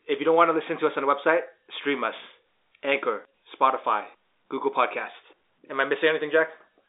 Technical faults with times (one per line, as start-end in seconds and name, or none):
none